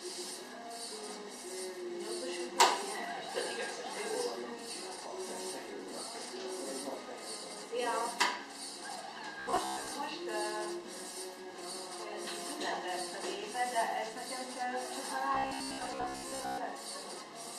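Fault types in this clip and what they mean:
Robotic sound from repeated short buffers: from 9.40 to 9.93 s and 15.35 to 16.58 s the sound turns into a rigid, metallic buzz near 66.7 Hz, likely from a 15 ms chunk replayed over most of the span. Unlike a stutter, the repeats fuse into a steady tone.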